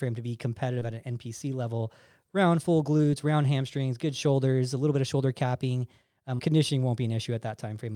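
Three spots of short concealed packet loss in this speech. The first is at 0.79 s, after "to be", the second at 2.97 s, after "level round full", and the last and longest runs from 6.35 to 6.41 s, after "bit of shoulder capping". About 20, 20 and then 40 ms of audio didn't arrive in time, so the decoder stretched the preceding sound to cover each gap and then blended back in, leaving a quick smear or wobble.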